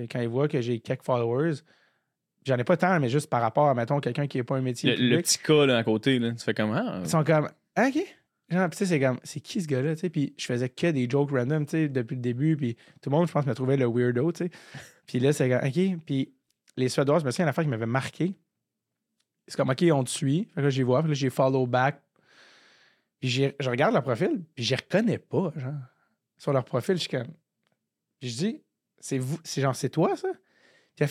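Speech recording, no audible technical faults anywhere in the clip.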